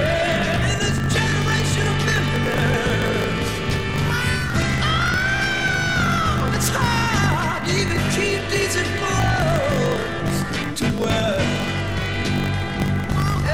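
Throughout the clip a block size mismatch (truncated) discards the tail of every block, which fits 1024-sample blocks being cut short. The result is a 50 Hz buzz and audio running 1.16 times fast at near-normal pitch, with waveform discontinuities every 20 ms and evenly spaced spectrogram striations.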